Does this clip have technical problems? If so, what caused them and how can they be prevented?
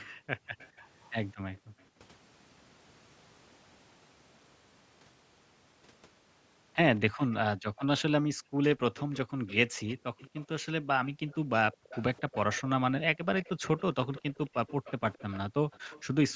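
Yes. A delayed second copy of a voice trails the speech by 217 ms, about 20 to 25 dB quieter, from 0.00 to 1.83 s, 7.17 to 8.02 s and 8.96 to 16.02 s. This is likely an echo leak: the far side's loudspeaker feeds its microphone and its echo canceller lets part through. Using headphones on that side prevents it.

The room sound dips by up to about 40 dB from 0.05 to 0.54 s, 1.59 to 1.89 s and 8.31 to 11.9 s, roughly two seconds in all. This is background gated by the echo canceller, which turns the microphone down hard while the loudspeaker plays. Headphones remove the need for that suppression.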